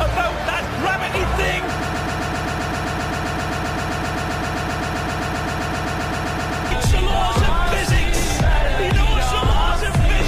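A broken-record loop occupies 1.80 s to 6.71 s: one 0.13 s fragment repeats exactly, 38 times back to back, and the audio due in that span is lost. Unlike an echo, nothing fades or overlaps. The likely cause is a stalled player or stream resending its last fragment.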